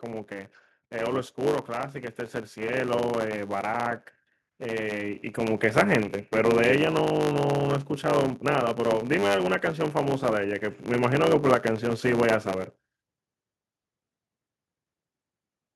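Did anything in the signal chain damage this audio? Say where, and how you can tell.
Yes. At the driver or buffer stage there is a block size mismatch (truncated) across the whole clip. A steady buzz at 100 Hz runs under the speech, and the speech plays about 1.07 times faster than normal while keeping roughly its natural pitch. This fits one stage writing 512-sample blocks that the next stage reads only partly. The tail of each block is discarded, so a discontinuity recurs at the block rate and time is skipped without any resampling.

The call processing stage also shows automatic gain rising twice. From 0.05 to 2.0 s the level climbs by about 5 dB, and from 3.67 to 5.72 s by about 6 dB. In both spans the speech and the background noise swell together over roughly two seconds. That shared, gradual rise is the sign of an automatic gain control judging its input too quiet and ramping its gain up, not of any change at the source.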